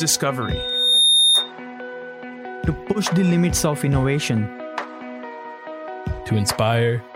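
At 0.42 s a loudspeaker feedback squeal kicks in: a pure tone near 3.7 kHz swelling over most of a second to about 10 dB above the sound, until 1.52 s. The mic was hearing its own speaker, and the loop gain topped one at that pitch.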